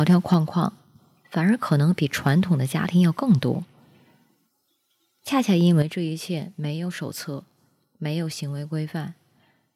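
Right at the start, 0.09 to 0.35 s, the speech crackles harshly, likely microphone overload: input about 4 dB too hot, so peak tops get flattened at the converter. At 0.34 s the level drops about 4 dB, likely the microphone volume stepped down by the call software reacting to that clipping. More brief overload crackle follows at 1.71 to 1.74 s, 3.30 to 3.33 s and 5.67 to 5.82 s. At 5.82 s there's a bigger step down of about 8 dB.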